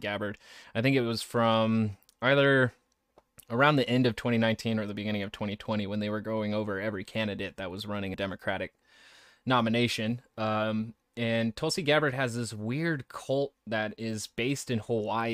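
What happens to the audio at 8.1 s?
At 8.13 s, compressed frames are skipped. The speech jumps ahead about 150 ms, fitting several 23.2 ms frames.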